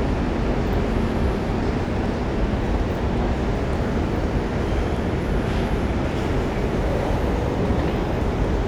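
The recording of sounds carries no audible technical fault at any point in the signal.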